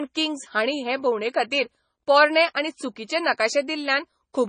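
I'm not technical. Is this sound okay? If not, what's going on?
No. The speech has a dull, watery, swirly sound from start to finish, likely from heavy MP3 compression, which cuts away all treble above 9.4 kHz and blurs quieter detail.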